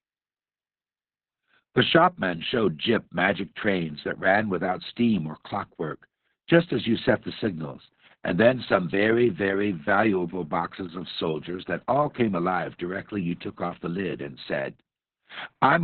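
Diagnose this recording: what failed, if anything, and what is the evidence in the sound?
The codec stage failed: Opus voice compression runs throughout the speech. Nothing is present above 4.3 kHz, so the narrowband SILK coder is discarding the top octaves. Speech sounds muffled, hoarse and robotic from coarse excitation coding, which points to a very low bitrate, near 6 kbps.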